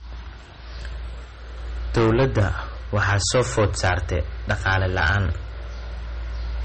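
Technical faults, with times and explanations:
Throughout: low-bitrate audio saved at a high bitrate. The speech has a smeared, swirly MP3 texture and no content above 8.4 kHz, likely from a coarse encoding near 32 kbit/s later re-saved at a much higher rate. A spectrogram shows a flat ceiling at 8.4 kHz.
1.95–2.51 s and 2.94–5.27 s: hard clipping. The speech is driven about 14 dB past full scale, so every loud syllable becomes harsh fuzz. On the waveform, peaks are sheared flat against the rails. A spectrogram shows dense harmonic smear rising toward the 8.4 kHz ceiling.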